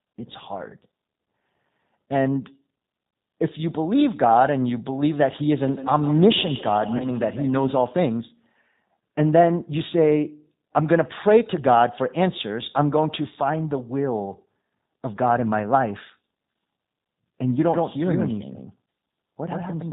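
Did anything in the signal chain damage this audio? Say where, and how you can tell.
Yes. At the codec stage, the whole clip carries G.729 coding at 8 kbit/s. A spectrogram shows nothing above 4 kHz, and the speech sounds rough and synthetic.

In call processing, feedback echo between two devices runs from 5.67 to 7.88 s. Speech returns roughly every 150 ms at about 13 dB down, visible as thinning copies.

On the network, packet loss concealed by the speech codec covers 6.97 to 7.08 s. About 30 ms is missing, which fits one lost packet. The gap is filled with extrapolated sound that fades, and the waveform sags afterwards.

A doubled audio track starts abruptly at 17.74 s and lasts to the end. A full-band, equally loud copy lags about 100 ms behind, likely from a second capture path, and shows as a clean offset duplicate without reverberant decay.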